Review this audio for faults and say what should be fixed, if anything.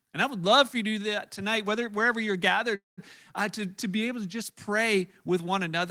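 A call audio freeze runs from 2.75 to 2.99 s, between "tonight whether wherever you're" and "uh to to be". The last sound stretches into a fading buzz or hiss, then goes silent. Speech resumes where it stopped, about 0.22 s late, with nothing lost. Packets were likely delayed, draining the jitter buffer. A larger or adaptive jitter buffer would prevent this.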